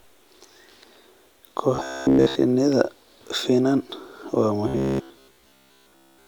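From 1.75 to 2.35 s, and again from 4.68 to 6.27 s after "finan waa", the speech turns to a metallic buzz at 66.7 Hz: robotic sound from repeated short buffers, likely from starved input looping 15 ms blocks, throughout the first span and most of the second.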